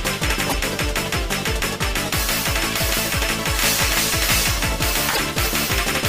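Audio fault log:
0.17 to 5.71 s, clock drift buffer slips: a regular click about every 0.72 s, roughly ten in all. This is likely two devices on separate clocks, a mismatch near 500 ppm. The buffer between them slowly drifts until a block of around fifteen samples is dropped or repeated.
0.46 to 0.54 s and 5.11 to 5.19 s, damaged data in a compressed stream: two short glitches, each about 80 ms long. Corrupted bytes make the decoder misread frames and lose sync. It then hunts for the next valid frame header.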